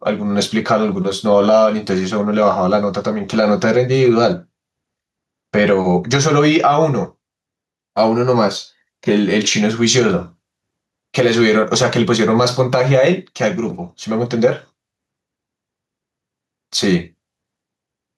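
Gain pumping runs through the whole of the speech, with loud and soft parts pulled closer together and the sound squashed, a swing of roughly 5 dB. The likely cause is input gain set far too high, with a fast limiter or compressor clamping down on each peak and then releasing. On a waveform the peaks look flattened and closer in level to the quieter passages.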